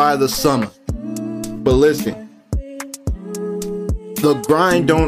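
No technical faults are audible.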